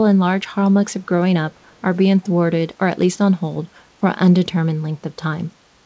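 From 2.22 to 2.28 s a brief echo leak surfaces: a faint, delayed copy of the speech trailing the original by about 333 ms, sitting far below the direct sound. It is likely the far end's echo canceller letting part of its loudspeaker's pickup slip back into the call. On a spectrogram it shows as a weak, smeared ghost of earlier speech energy, capped at 8 kHz like the rest of the call audio, and the waveform barely changes.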